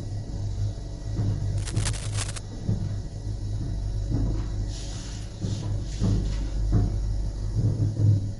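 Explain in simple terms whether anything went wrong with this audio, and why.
MP3 compression affects the whole recording. The sound seems squeezed into a small file, most likely by MP3 encoding. To save space, the encoder throws away detail it judges least noticeable. Here it removes everything above about 11.2 kHz, so the top end sounds dull, and faint details flicker in and out from moment to moment. That leaves a watery, swirly texture, with sharp attacks sounding smeared rather than crisp.

Cable scratch noise runs from 1.58 to 2.38 s. For just under a second, a rough, uneven scratching or rustling sits on top of the sound. The likely cause is a worn cable, plug or control being moved. Its electrical contact flickers rapidly between good and bad, and each flicker adds a small burst of noise. Together these bursts make the crackly scrape.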